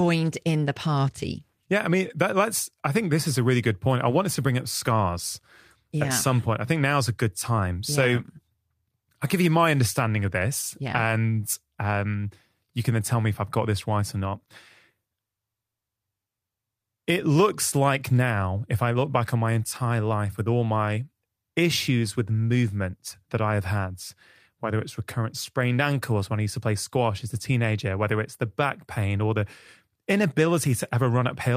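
No technical faults can be heard in the recording.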